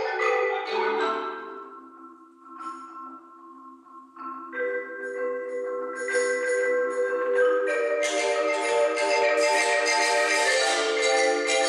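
No technical faults can be heard anywhere in the recording; the signal stays steady and intact throughout.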